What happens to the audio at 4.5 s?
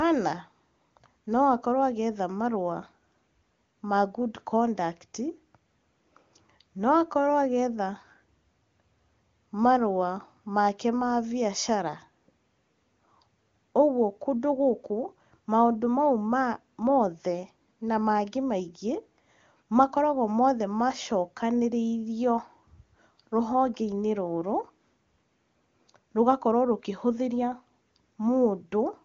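Nothing goes wrong at 4.5 s: the speech carries on intact through the AMR wideband (HD Voice) codec at 23.85 kbit/s, with no audible break or distortion at that moment.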